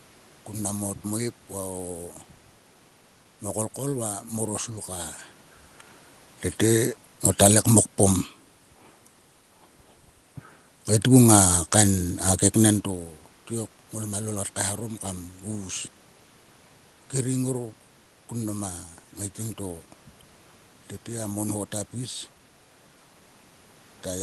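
No technical faults can be heard in the speech. The audio carries the coding texture of a call codec with its top end stopping near 12 kHz, background room noise, and level shifts around 5 s and 12.5 s as the talker moves relative to the microphone.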